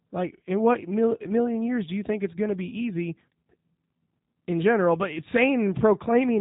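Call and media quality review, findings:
G.729 codec throughout: speech rough and slightly synthetic, nothing above 3.8 kHz. Pulse-based rebuild from vocal tract filter and pitch predictor at 8 kbit/s, damage plainly audible.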